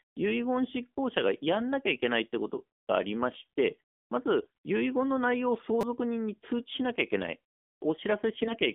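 The whole recording went through an AMR narrowband mobile codec at a low bit rate, which sounds like AMR-NB's 7.4 kbps mode. The line is confined to about 200 Hz to 3.5 kHz, and the coarse pulse model leaves the speech plainly buzzy and synthetic.

From 4.40 to 4.48 s, AMR bit errors flipped the weakly protected bits in several consecutive frames, roughly one bit in ten. Mispositioned excitation pulses and wrong gain and spectral values make the speech there hoarse and gargly, though its pitch and level hold.

At 5.81 to 5.83 s, fresh audio arrived late, so a repeated buffer played one short block four extra times. The repeat fits a 5 ms buffer. Its hard joins produce a brief buzzing stutter, and about 20 ms of audio is lost.

From 8.38 to 8.57 s, AMR bit errors corrupt another run of frames at a slightly lower rate. The same scratchy, gargled roughness returns over that stretch.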